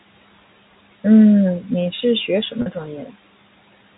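Speech over a telephone-band G.711 line, with room noise sitting about 20 dB below it. At 2.62 to 2.66 s there's packet loss with pitch repetition: roughly 40 ms dropped out, which fits two 20 ms packets. The receiver filled it by looping the last pitch period, so you hear a brief held, buzzy tone.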